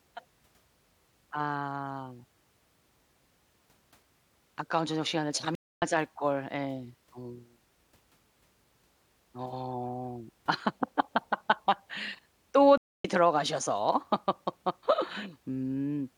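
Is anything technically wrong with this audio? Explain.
Yes, there are two stream reconnects. At 5.55 to 5.82 s and again at 12.78 to 13.05 s the speech cuts to about a quarter-second of silence while the connection drops and the player restarts its decoder. Each time it picks up further along, skipping roughly 150 ms the first time and around 300 ms the second, so a bit of speech is simply missing.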